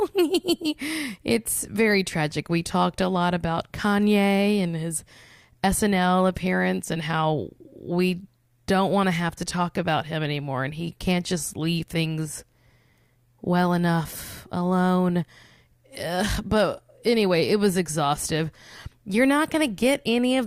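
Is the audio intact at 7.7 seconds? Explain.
Yes, the speech at 7.7 seconds is intact, with no audible dropout, distortion or other fault at that moment.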